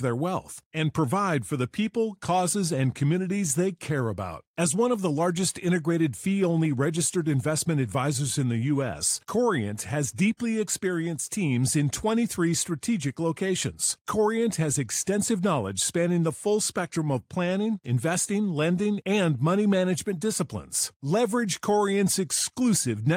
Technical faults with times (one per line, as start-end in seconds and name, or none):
none